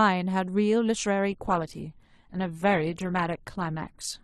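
At 1.31 s the speech switches abruptly, with no gap, to a lower-bitrate adaptive stream until the end: codec artefacts rise, consistent with Opus dropping from around 64 to 12 kbit/s.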